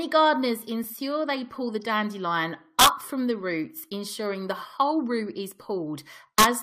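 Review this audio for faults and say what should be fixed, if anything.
Overlap between stream segments produces tiny skips at 0.84 s, just before "they pull the dandelion", and at 3.84 s, between "from the roots" and "ensuring the whole root". They drop about 12 ms and 10 ms where overlapping segment timestamps were trimmed, so the waveform jumps. The spacing is consistent with segments of about 1 s. Unlike a dropout, there is no gap of silence, only a jump where the audio joins. Segment boundaries should be aligned so that timestamps meet exactly and nothing is trimmed.

Integer overflow causes violent cracks from 2.79 to 2.87 s, after "they pull the dandelion" and before "from the roots ensuring", and from 6.38 to 6.44 s. Peaks driven about 4 dB past full scale wrap to the opposite sign. Clipping would flatten those peaks, but here they flip, so the result is harsher than clipping. The gain and summing stages should saturate at the limit instead of wrapping, or leave enough headroom.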